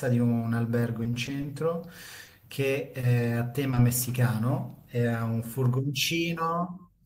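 Speech with packet loss in two forms. From 1.03 to 1.46 s there is repeated packet loss (robotic sound): four gaps, none longer than 20 ms, are patched close together, so about a fifth of the stretch turns choppy rather than a single blip. Later, short concealed packet loss appears as brief smears at 2.26–2.31, 3.01–3.05, 3.71–3.75 and 3.75–3.79 s, each a 20 ms hole filled by extending the preceding sound. The first of these also stretches timing slightly. They stand apart from the robotic stretch because they are short, separate events rather than one sustained stretch.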